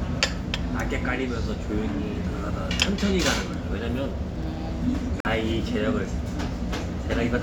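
A recording of sounds with one corrupt frame muted: at 5.20 s the audio drops abruptly to silence for about 60 ms, until 5.26 s. Damaged compressed data was rejected by the decoder and replaced with silence, a gap consistent with a few consecutive frames, while the surrounding timing stays intact.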